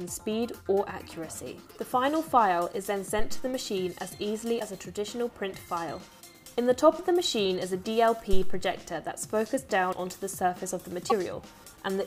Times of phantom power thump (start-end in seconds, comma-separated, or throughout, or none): 8.33-8.70